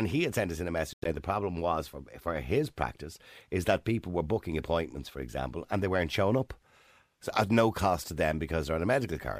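Speech that cuts out abruptly between 0.93 and 1.12 s, after "sent us in a" and before "the problem was for", with about 107 ms of sound missing in short gaps, the longest near 91 ms. The likely cause is a Bluetooth dropout: late packets were discarded, and playback resumed further along as though it had kept running.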